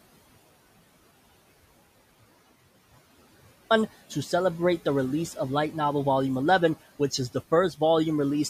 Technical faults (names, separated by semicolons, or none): audio dropout to silence